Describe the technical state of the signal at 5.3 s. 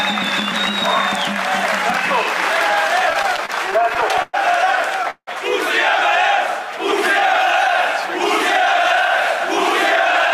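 A call audio freeze runs from 5.10 to 5.29 s, likely from packets arriving late and draining the jitter buffer. The last sound is stretched into a fading buzz that ends in about 60 ms of silence, and then the audio resumes with nothing lost, now running 169 ms later.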